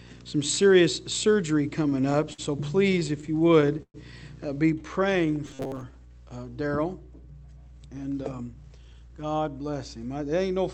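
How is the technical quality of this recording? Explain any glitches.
The recording has several clear glitches: a display buzz at the start, two bursts of stutter, a slowed stretch with a robotic patch, and a hurried stretch near the end. The sound is band-limited to about 8 kHz, which fits a call codec such as Opus.

From 0.0 to 4.6 s there is video or display buzz. A screen or video cable is coupling into the audio. The buzz sits at the 60 Hz field rate, with hash above it. It runs around 20 dB below the wanted sound. It stops at 4.6 s.

Repeated stalls (stutter) occur from 1.83 to 2.40 s and again from 2.92 to 3.96 s. Packets arrived late, so the receiver's buffer ran dry again and again. Each time, it stretched the last sound until fresh audio came. The first burst has 6 such gaps, the longest 53 ms, filling about 18% of that span. The second has 11 gaps, the longest 116 ms, filling about 21%. 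Nothing is lost, but the sound drags and hiccups.

Jitter buffer slow-down runs from 4.79 to 5.93 s. The buffer was low, so the receiver repeated single pitch periods and slices of pauses to build a reserve. Playback drops to 88% speed, adding 142 ms. Pitch stays the same. Sounds are drawn out.

Robotic sound from repeated short buffers appears from 5.46 to 5.82 s. Most of that stretch is a rigid, metallic buzz at 133 Hz that only loosely tracks the sound. This is likely caused by the software looping a buffer of about 7.5 ms while real audio was skipped. The loop length sets the fixed buzz pitch.

Jitter buffer speed-up runs from 7.79 to 9.49 s. Too much audio had piled up in the buffer, so the receiver cut short pieces of one or a few pitch periods. About a third of a second is removed. Playback runs at 114% speed at unchanged pitch, and it sounds noticeably hurried.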